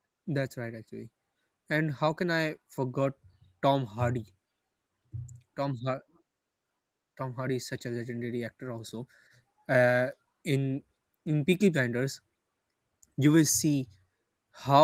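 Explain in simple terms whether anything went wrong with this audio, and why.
Nothing went wrong with this audio, because no fault can be heard anywhere in the speech.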